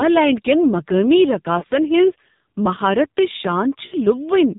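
Throughout, the speech has passed through an AMR narrowband mobile codec at a very low bitrate, which fits about 5.9 kbps. With 8 kHz sampling, nothing above 4 kHz survives, and with so few pulses driving the vocal-tract model in each frame, the voice sounds heavily buzzy and synthetic.

Lost AMR speech frames occur at 1.60 to 1.64 s, where radio errors wiped out what fits a single 20 ms frame. The decoder reused its last good settings at lower gain, causing a brief dip. At 3.86 to 3.96 s, a gap fitting three frames stretches the sound and sags it toward silence before it returns rough.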